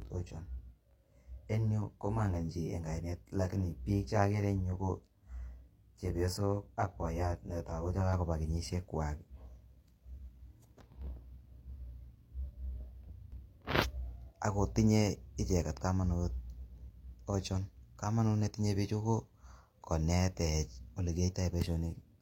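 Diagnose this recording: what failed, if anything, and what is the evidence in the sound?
One channel ran about 20 ms late in the driver or buffer path before the two were summed to mono. From the start to 8.13 s, channel delay (comb filtering) makes the speech rough and slightly doubled, with notches from roughly 30 Hz, clearing before "kenyisiek kwak".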